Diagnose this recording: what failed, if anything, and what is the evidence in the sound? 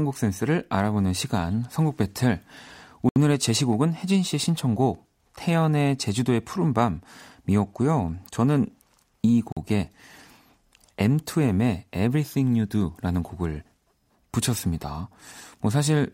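The speech drops to dead silence twice, for about 69 ms at 3.09 to 3.16 s and about 44 ms at 9.52 to 9.57 s, then resumes. At the playback stage, a Bluetooth stall is the likely cause: the wireless link held packets back, the headphone buffer emptied, and output paused until retransmissions arrived.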